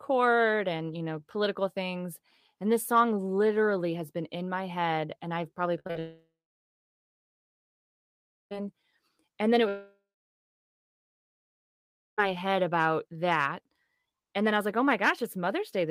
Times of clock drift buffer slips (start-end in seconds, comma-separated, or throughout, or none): none